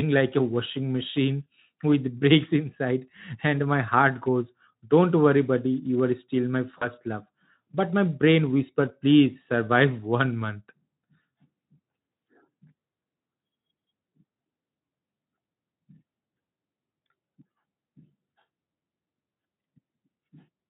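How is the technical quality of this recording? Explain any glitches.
One glitch stands out: VoIP packet loss concealed by the speech codec, from 6.78 to 6.87 s, just after "are still my". About 40 ms of packets went missing, which fits two lost 20 ms frames. The Speex decoder extended its last pitch and filter at falling gain, so the sound smears into a brief buzzy tone or coloured noise that fades, and stays weak or distorted as it recovers. Around it, the Speex coding adds only light roughness, consistent with a mid-rate setting near 15 kbps.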